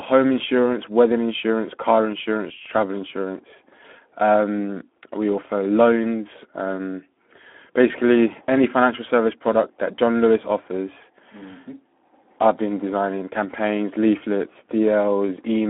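All the way through, the speech carries plainly audible Speex codec damage, hoarse and noisy, fitting roughly 11 kbps, squeezed into a 250 Hz to 3.5 kHz band with nothing above 3.8 kHz.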